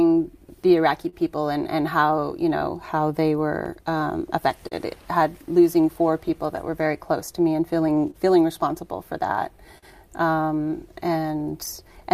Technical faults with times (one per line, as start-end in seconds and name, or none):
0.00-12.13 clock drift between sender and receiver
0.02-11.97 repeated timing corrections
1.09-1.14 short stall from a late packet
3.64-9.84 scattered short gaps